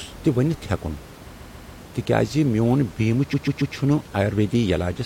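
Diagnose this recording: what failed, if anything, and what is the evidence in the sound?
Repeated frames, codec or storage stage. At 1.37–1.79 s and 3.32–3.74 s (after "میون بیمہٕ"), a 139 ms block stutters three extra times, adding 418 ms each.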